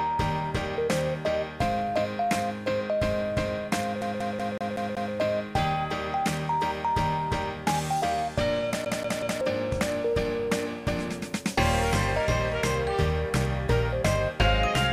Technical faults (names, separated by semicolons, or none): CD stuck on one turn